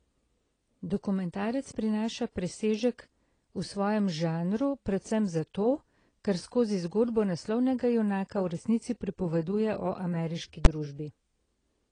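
From the start, the speech sounds dull and smeared, with nothing above 9.8 kHz. Sibilants fizz and warble. This is likely AAC compression, heard plainly. The damage fits AAC-LC at a low bitrate near 24 kbps, which cut the top band and thinned the spectrum.

At 10.65 s, just after "resnici pripoveduje o ameriški", there is one sharp bang. This is invalid numbers at full scale. A calculation went invalid and pinned the output to its limit. The short block, about 11 ms, fits 512 samples.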